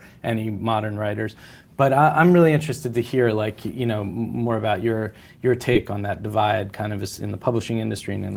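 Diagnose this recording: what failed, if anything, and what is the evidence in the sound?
The network stage failed once, as short concealed packet loss at about 5.73 to 5.77 s, between "more about your your" and "on that divide kind". Roughly 20 ms of the call never arrived, and the decoder's concealment extrapolated about 14 ms from the preceding sound before cross-fading back, leaving a brief smear rather than silence. That synthesized fill is what separates it from a buffer underrun or plain dropout, which would cut to a hard gap or click.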